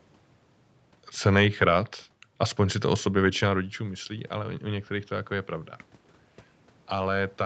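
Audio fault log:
3.22–5.59 s, automatic gain rising: after "si to o sobě" the speech input falls about 11 dB as the talker moves back near 3.5 s. The automatic gain control then raises its gain about 4 dB over two seconds, swelling speech and room noise together.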